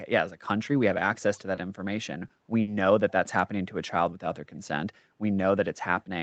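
At 1.55 s and again at 2.27 s, short concealed packet loss replaces about 20 ms with an extrapolated continuation, heard as a brief smear rather than a gap. At 2.61 s a burst of packet loss drops 60 ms. The concealment fades out into a held buzz or hiss, then the sound resumes further on with that stretch missing, longer than the brief smears.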